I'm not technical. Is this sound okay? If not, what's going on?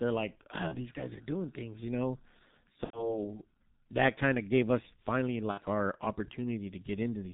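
No. The speech went through the G.723.1 codec, an old internet-phone system that squeezes speech into very little data, so the whole clip sounds muffled and hoarse, with nothing above 4 kHz and consonants smeared together.

There is also VoIP packet loss concealed by the speech codec. Pieces of the call went missing, and the receiver filled each gap by stretching the last sound it had. You hear a brief buzzy or fading smear at 0.68 to 0.77 s, 2.84 to 3.21 s and 5.51 to 5.61 s.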